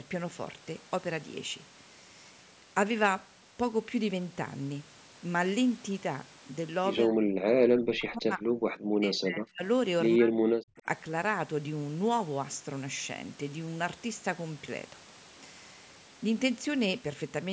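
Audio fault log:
7.05–7.23 s, 7.64–8.5 s, 8.94–9.63 s, 10.16–10.86 s: speech suppressed in double talk. The echo canceller likely confused overlapping talk with echo, so the voice drops by about 30 to 40 dB and breaks up.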